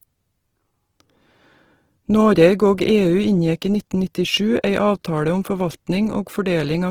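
A speech recording that sounds rough and grainy from start to finish, with a noisy, sandy texture where the tonal parts of the sound should be smooth. The damage is plainly audible, though the top end still reaches to about 20.2 kHz. The likely cause is Opus compression at a low bitrate, which fits roughly 16 kbps. It runs in its fullband music mode, where starved bands are filled with folded or noise-like content rather than left empty.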